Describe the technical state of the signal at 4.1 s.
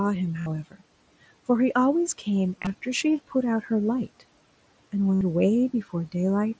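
At 4.1 s the speech is intact, with no dropout, click, distortion or other fault at that moment; it carries only the ordinary narrow bandwidth of a wideband Bluetooth headset call, stopping at 8 kHz, over room noise about 23 dB below the speech.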